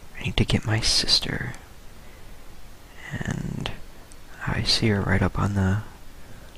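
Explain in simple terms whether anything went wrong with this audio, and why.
Nothing went wrong here; the recording sounds fine.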